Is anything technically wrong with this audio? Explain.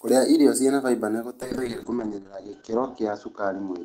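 Yes. From 1.43 s, after "irio cĩina faimba nĩ", a call bitrate drop cuts encoding from 48 to 8 kbps and bandwidth from 20 kHz to 8 kHz. The speech stays rough and muffled to the end.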